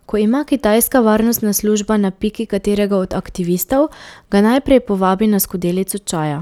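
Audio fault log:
No audible faults detected.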